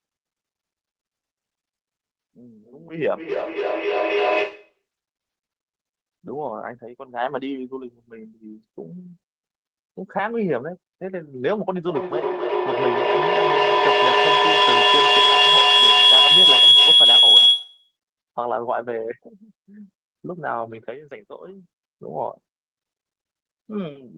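From 2.61 to 4.85 s there is feedback echo between two devices. A second device in the room replays this microphone's signal, which is picked up again and missed by the echo canceller. The sound returns roughly every 300 ms and builds to about 4 dB above the speech.

From 11.89 to 17.96 s the same loop gains level on each trip and becomes feedback howl. The repeats narrow to a tone around 3 kHz, with a loop delay of about 300 ms; the howl peaks about 12 dB above the speech and continues until 17.96 s.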